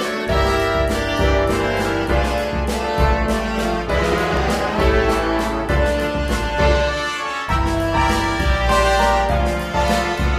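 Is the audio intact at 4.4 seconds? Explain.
No, not quite. There's a loud pop running from about 4.12 to 4.39 s, so it finishes right at that moment. It's actually two pops in quick succession, peaking about 10 dB above the surrounding sound, with the audio carrying on underneath. That double thump sounds like a sudden voltage step or pulse getting into the signal chain, likely from a plug, a switch, static or a driver glitch.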